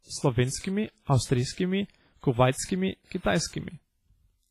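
Likely low-bitrate WMA compression, consistent with about 24 kbps, has heavily damaged this speech throughout, leaving ringing, washy smearing, breathing hiss, and nothing above 15.5 kHz.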